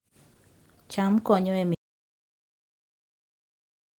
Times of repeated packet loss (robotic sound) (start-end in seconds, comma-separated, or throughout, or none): none